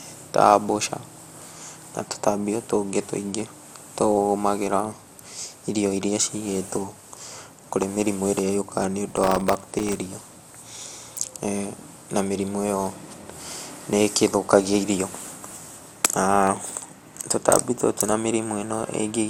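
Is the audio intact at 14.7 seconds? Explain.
No. At 14.7 s, as throughout the speech, there is generation loss, likely from the audio being MP2-encoded and decoded about five times. Each pass requantises on a shifted frame grid, so the result sounds swirly, smeared and hollow, with blurred attacks, nothing above 16.7 kHz, and more wear than 96 kbit/s alone would explain.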